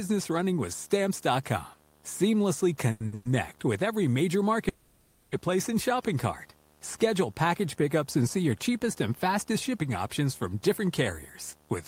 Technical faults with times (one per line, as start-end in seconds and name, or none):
0.00-11.87 video or display buzz
2.91-3.14 short stall from a late packet
3.14-3.27 call audio freeze
4.69-5.35 call audio freeze